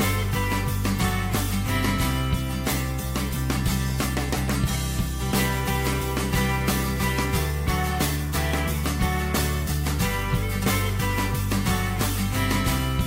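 Nothing in this recording stood out as a technical fault on listening.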